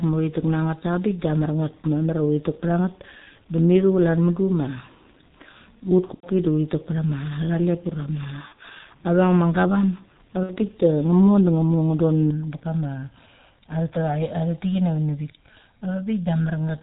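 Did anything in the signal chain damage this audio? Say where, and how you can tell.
Yes. The codec stage damaged the whole clip. It was encoded with G.723.1, with heavy codec damage, at a rate that fits its 6.3 kbit/s mode. The codec discards everything above 4 kHz and rebuilds the voice from a slowly updated model in 30 ms frames. The result throughout is muffled, hoarse speech with smeared consonants, and that dull, band-limited character never lifts at any point in the recording.

The network stage dropped packets three times, and the speech decoder concealed each loss. At 6.14–6.27 s, just before "du uthi tek pecha", about 90 ms is missing, which fits three lost 30 ms frames. At 8.48–8.53 s, before "a veng", about 30 ms is missing. At 10.43–10.54 s, between "gavam a" and "bik de", about 60 ms is missing. Each gap is bridged by sound stretched from the last frame into a buzzy tone or coloured noise that fades, and the voice stays weak or distorted briefly afterwards.

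From 12.31 s to the end, a channel delay (comb filtering) appears. It comes from a stereo-to-mono fold where one channel arrives about 1.5 ms late. Summing the two copies cancels shared content at evenly spaced frequencies, with the first notch around 400 Hz. The tail of the clip therefore sounds hollow and phasey, with fixed spectral notches that weren't there before 12.31 s.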